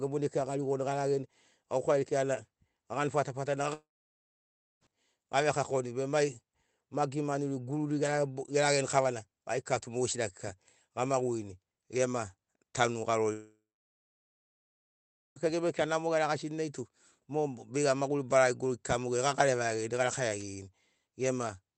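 At 3.73 s the speech stops abruptly. The last sound trails on as a brief fading buzz, then about 0.95 s of near silence follows. The speech returns at 4.84 s on "gave kakoni be mai", with about 1.1 s of audio simply gone. This is most likely a long network dropout. Packets stopped arriving, and the receiver stretched the final sound before giving up.

A second, longer gap runs from 13.33 s to 15.39 s. The same fading tail is heard, then roughly 1.7 s of silence. About 2 s of speech never comes back.

At 20.38 s a wireless microphone noise hit breaks through. It lasts about 57 ms, to 20.44 s. It is a quick swish of static over the speech. The radio signal faded for a moment, and receiver noise rose into the gap.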